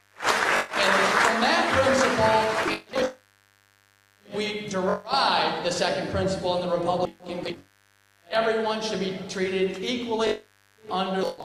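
A steady, raspy buzz sits about 40 dB below the sound throughout: mains buzz, with sharp switching spikes on the 50 Hz supply spraying harmonics into the kilohertz range.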